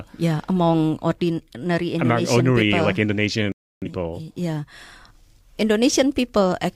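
It's a speech clip with a digital broadcast dropout from 3.52 to 3.87 s: the sound mutes abruptly, stays silent for about 0.3 s, then resumes further along. That gap fits the receiver losing a handful of frames and muting until clean ones arrived.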